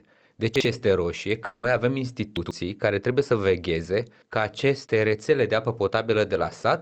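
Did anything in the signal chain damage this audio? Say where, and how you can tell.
Yes. Chunks out of order in the buffer or network stage: at 0.56–0.65 s, just before "este roșie", and 2.37–2.51 s, before "care trebuie să vegheze", roughly 46 ms blocks play one and two blocks late, causing jumbled joins.

From 1.45 to 1.65 s, just after "este roșie", about 180 ms is missing and replaced by a fading concealment buzz, likely a long network dropout, before the sound resumes further on.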